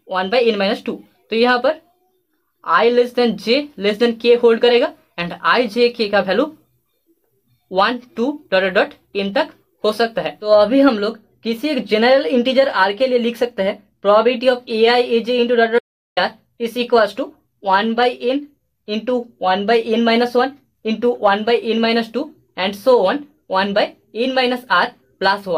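At 15.79 s the sound cuts off mid-flow and returns at 16.17 s: an audio dropout to silence lasting about 0.38 s. The gap is silent with no room tone, likely because the input link briefly failed while recording continued writing silence.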